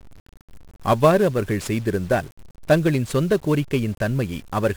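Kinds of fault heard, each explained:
1-bit DFPWM compression: each sample is one bit nudging an adaptive level, so the speech sounds heavily fuzzy and crackly with treble buried in hiss, consistent with roughly 48 kbps.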